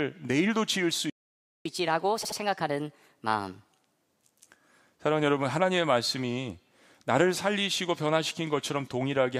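At 1.10 s the speech stops dead and stays silent until 1.66 s, a gap of about 0.55 s. This is a playback stall. The likely cause is a player that ran out of buffered data or had its audio thread blocked.

From 1.66 s to 4.02 s the player runs catch-up at higher speed. It resamples its backlog at 1.25 times normal rate. The speech sounds hurried and raised in pitch by about four semitones. At 4.02 s speed and pitch drop back to normal.

Inside that fast stretch, from 2.22 s to 2.37 s, there are repeated frames. A 72 ms block of compressed audio was delivered more than once. The decoder plays it two extra times. This gives a short stutter and adds 144 ms to the audio.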